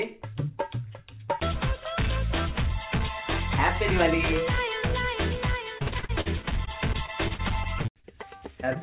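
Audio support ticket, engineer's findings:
Repeated packet loss (robotic sound), 5.78–8.77 s: roughly two dozen short holes, longest 50 ms, each concealed by stretching the preceding sound, about a fifth of the span. A recurring choppy texture, unlike a single isolated dropout. Jitter buffer/network. Band-limited to 4 kHz, fitting a G.711 call path.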